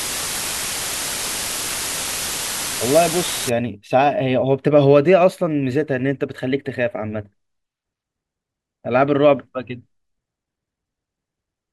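From 0.0 to 3.49 s the speech carries low bit depth with dither: the signal was reduced to just 4 bits, with dither added before rounding, so the quantisation error becomes a steady, even hiss rather than distortion, and that hiss sits nearly as loud as the speech itself.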